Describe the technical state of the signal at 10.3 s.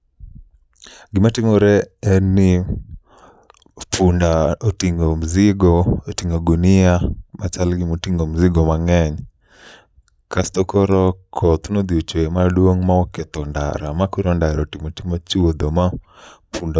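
At 10.3 s the speech signal is intact, with no dropout, click, clipping or other fault at that point.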